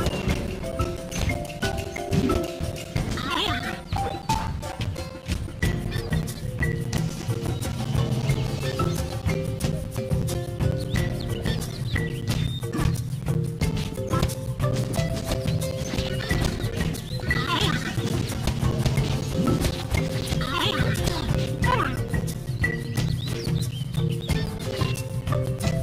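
From 0.09 s to 25.72 s the audio carries periodic USB or driver dropouts, repeating every 0.125 s, eight times per second, around two hundred in all. At each one a background task stalls the USB bus or audio driver, and roughly 10 ms of signal goes missing and is replaced by silence. The evenly spaced gaps produce a steady ticking or popping rhythm that sounds only while signal is present.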